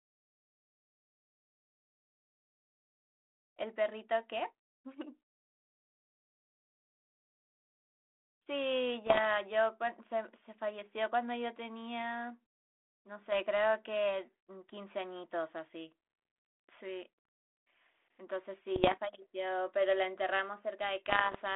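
Rough, crackly bursts with pops and brief jumps in level break into the speech from 9.06 to 9.20 s, again from 18.76 to 18.95 s, and from 21.06 to 21.36 s. These are bit errors on an ADPCM link, here the 32 kbit/s G.726 telephone path. Each flipped bit throws off the decoder's adaptive step size and predictor, so the damage smears on for milliseconds. The first burst has the highest error rate, near one and a half percent against under one percent later.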